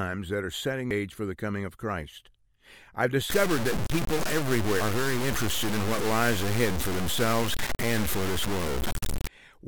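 Two brief glitches at 0.91 s and 4.81 s are damaged data in a compressed stream: the decoder hits corrupted frames, loses sync and jumps ahead to the next clean header. From 3.30 s to 9.28 s the audio turns distorted, with distortion that tracks the sound and is nearly as loud as the sound itself. That's likely low bit depth without dither, plain truncation to something like 3 bits.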